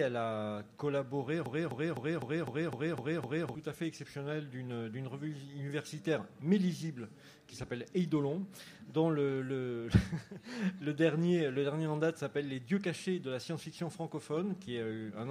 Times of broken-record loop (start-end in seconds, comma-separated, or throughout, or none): 1.46-3.55